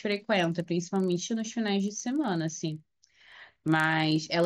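A regular ticking at 25 Hz runs under the speech throughout, present only while there is signal. This is a resampler restarted on every block: each 40 ms block was converted from 16 kHz to 48 kHz in isolation, leaving a small error at every block boundary.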